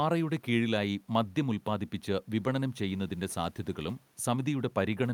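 Nothing goes wrong technically in this speech recording; the only extra sound is some quiet room noise sitting about 38 dB under the speech, and that comes from the space the microphone was in rather than from the system.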